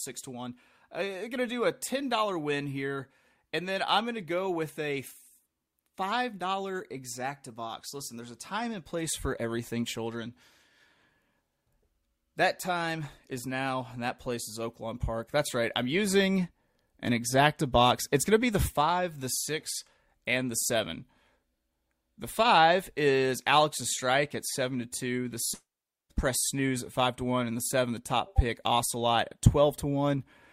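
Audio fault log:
No faults are heard in this speech clip. Nothing in the recording calls for a log entry.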